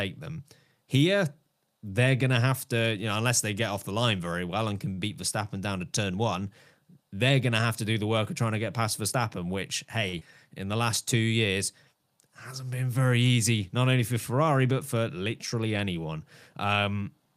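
At 4.93 to 5.01 s and again at 10.09 to 10.16 s, the speech briefly hangs on one sound. These are short stalls from a late packet: the jitter buffer ran dry, and the receiver stretched the last sound by 42 ms and then 44 ms until the data arrived.

At 10.19 to 10.24 s, a quick smear replaces the speech. This is short concealed packet loss: 60 ms never arrived in time, 20 ms was synthesized, and the delay dropped by about 40 ms.

From 10.68 to 11.29 s, the speech drags at unchanged pitch, running at 94% speed. This is a jitter buffer slow-down: repeated pitch periods added 46 ms to rebuild the buffer's reserve.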